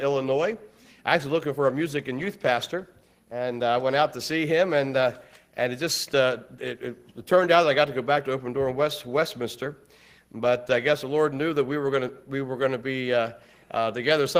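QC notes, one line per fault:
No faults turned up anywhere in this one, so there's nothing to log.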